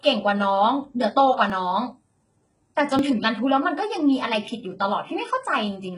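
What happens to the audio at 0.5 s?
At 0.5 s the speech shows heavy HE-AAC compression, which runs through the whole clip. Nothing is left above 11 kHz. The treble below that is likely rebuilt by copying lower bands upward, which fits a very low bitrate near 12 kbps. S sounds come out gritty and metallic.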